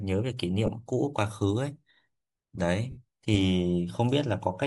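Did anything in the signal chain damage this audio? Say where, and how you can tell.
Yes. Throughout the speech the upper band sounds grainy and breathy, with hiss-like texture standing in for real detail. That points to the codec stage, likely Bluetooth LC3 compression at a low-to-moderate rate. Unlike plain low-pass filtering, the highs are noise-filled rather than simply missing.

The network stage also shows lost LE Audio frames. At 0.67 s there is a brief noisy smear. From 2.90 to 2.97 s a longer one of about 70 ms fades as it goes, as the decoder repeats the last spectrum with scrambled signs. A hard dropout would give clean silence instead.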